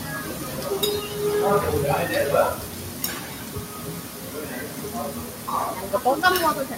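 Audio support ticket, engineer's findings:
Noise suppressor applied to music or sounds, throughout. Sustained content and tails pulled down while onsets pass; level pumps and thins, swinging roughly 10 dB. Speech-tuned suppression treating steady tones and ambience as noise and attenuating them. Disable or bypass for non-speech material.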